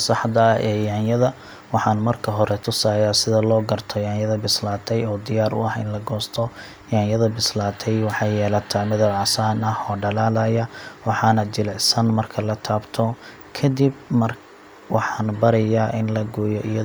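No technical faults are audible.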